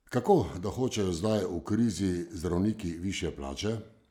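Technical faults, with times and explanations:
The speech signal shows no technical faults at any point.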